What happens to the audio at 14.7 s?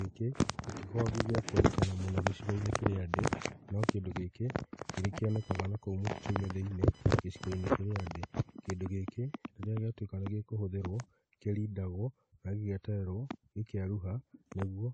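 At 14.7 s, as throughout, the speech is band-limited above 9 kHz with layered artefacts from both codecs heard together, likely transcoding between lossy codecs, fitting a low-rate AAC stage re-encoded to WMA.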